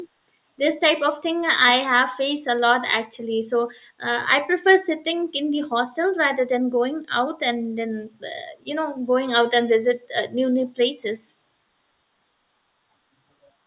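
No technical faults are audible.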